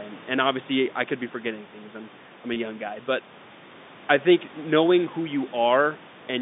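At 2.54 to 2.56 s, a short stretch of speech is missing and has been patched by packet loss with pitch repetition. The receiver loops the last pitch period across the gap of about 20 ms, which fits a single lost packet, so the sound holds briefly with a faint buzz and doesn't go silent. That separates it from a plain dropout, which would leave a hard gap or click. Underneath, the band-limited G.711 line and the room noise about 20 dB below the speech are audible.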